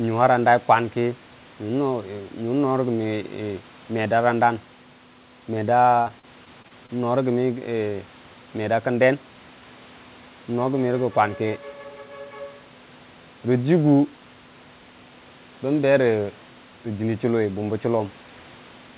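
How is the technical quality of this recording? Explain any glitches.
The recording has one glitch, heard over a call link whose audio stops at 4 kHz, which fits a narrowband G.711-style codec. Repeated packet loss (robotic sound) from 6.02 to 6.90 s: seven short dropouts, none longer than about 39 ms, each patched by stretching the preceding sound. The rapid succession of patches makes that stretch choppy, with pieces missing, with about a fifth of it filled in.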